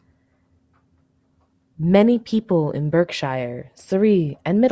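Nothing in this speech recording stands out as a technical fault, so there's nothing here to trace or explain.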